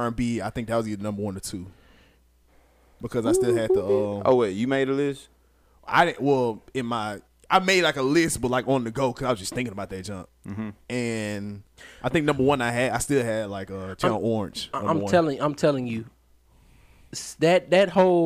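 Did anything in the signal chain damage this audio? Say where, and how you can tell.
No, nothing in the signal chain audibly damaged this speech.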